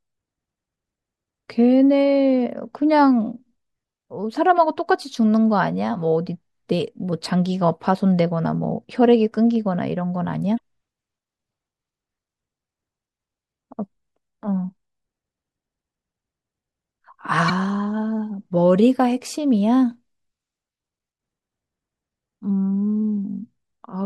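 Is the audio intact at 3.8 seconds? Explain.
Yes, the speech at 3.8 seconds plays through cleanly, with no dropout, click, distortion or other fault at that point.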